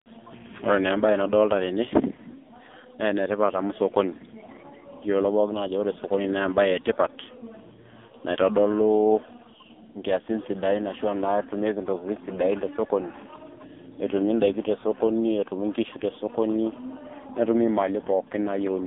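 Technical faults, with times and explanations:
Throughout: AMR narrowband mobile codec. The speech sits between 250 Hz and 3.6 kHz, with nothing above 3.7 kHz, and heavy damage makes it buzzy and synthetic, which fits a low AMR-NB mode near 5.9 kbps. Plain band-limiting would sound dull, not rebuilt.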